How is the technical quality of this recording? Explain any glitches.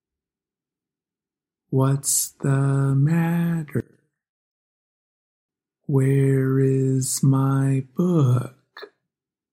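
The recording has one clear fault. From 3.80 to 5.49 s the level collapses by about 28 dB, leaving a faint residue. This is likely one channel inverted: with reversed polarity, the shared content cancels when the stereo pair is summed to mono.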